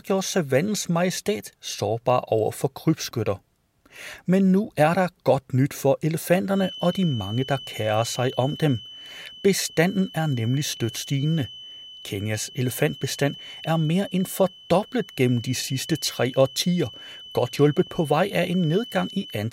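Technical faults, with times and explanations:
6.48–19.52 s, feedback whistle: The loop from loudspeaker back into microphone was likely sitting right at the edge of instability, with enough gain for one frequency to sustain itself but not enough to build into a howl. What reaches the recording is a thin, steady tone near 3 kHz that enters partway through the speech and persists to the end, about 20 dB below the speech and swelling and fading slowly in level.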